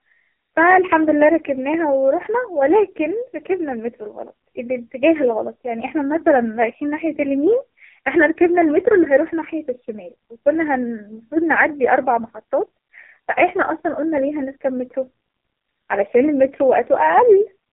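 Throughout the recording the speech has passed through the AMR narrowband mobile codec, running at one of its lowest modes, which fits a rate of roughly 5 kbps. The line band runs from 150 Hz to 3.6 kHz, and nothing survives above 3.8 kHz. With so few bits, the codec rebuilds each 20 ms frame from a coarse vocal-tract model and sparse pulses, so the voice comes out heavily damaged: muffled, buzzy and distinctly synthetic.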